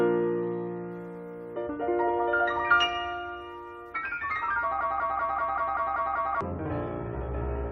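From 4.81 s to 6.41 s the audio gets stuck in a broken-record loop: a fragment of about 192 ms plays back to back, exactly the same each time, eight times over before the sound moves on. Whatever should have played in that stretch is simply gone. It's likely that the player, encoder or stream stalled there and kept pushing out the last chunk it had buffered until data started flowing again.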